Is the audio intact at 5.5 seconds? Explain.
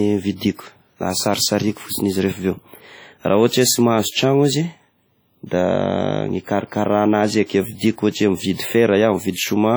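No. At 5.5 seconds the speech carries the same heavy transform-codec damage that runs through the whole clip, most likely WMA compression at a low bitrate, around 32 kbps. Long transform blocks spread quantisation noise over tens of milliseconds, so the speech sounds ringing and washy, with hiss that swells and fades with the signal. On a spectrogram, energy smears in time around onsets and weak partials drop out as blank patches, though content still reaches about 20.1 kHz.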